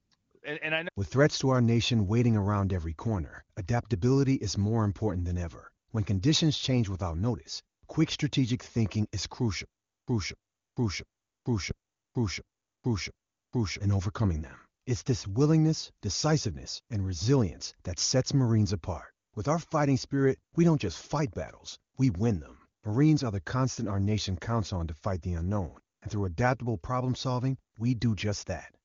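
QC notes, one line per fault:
9.65 to 13.79 s, stutter with silent gaps: after "quick strategic thinking is", the same 262 ms fragment plays six times, each followed by 429 ms of dead silence, until "in overcoming them". A stalled stream replaying its last chunk is the likely cause, and the audio for that stretch is lost.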